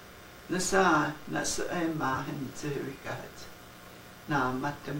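At 2.13 to 2.16 s, a corrupt frame was decoded: damaged bits in what sounds like a single compressed frame were played as if valid, so misread gains or codes put energy at the wrong frequencies for about 32 ms. It registers as a brief, out-of-place artefact, with an error reaching roughly -20 dBFS. On a spectrogram it shows as a short rectangular block of stray energy spanning one frame; the waveform shows a matching brief disturbance.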